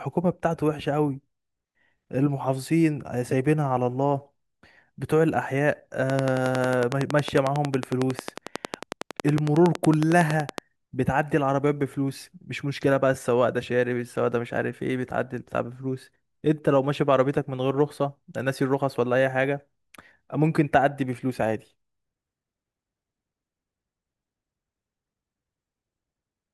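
From 6.10 s to 10.59 s, a train of clicks runs over the speech. The clicks arrive at a steady 10.9 per second, about fifty in all. Each one has much the same sharp shape. They stand out strongly, peaking around 15 dB above the speech. The ticking carries on through the pauses as well. That points to something injecting pulses into the signal path, likely interference from nearby equipment or a faulty connection or power supply.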